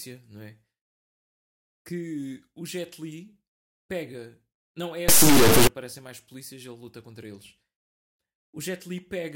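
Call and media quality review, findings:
Integer read as float, 5.08–5.67 s: speech replaced by extremely loud buzzing square wave slamming between silence and the clipping limit. Probable component: sample-format conversion in the decode/playback path; the sound fits 32-bit integer samples read as 32-bit float. Differs from ordinary clipping: no distorted speech underneath, only a harsh on/off buzz, dropping to silence in very quiet passages rather than just flattening peaks.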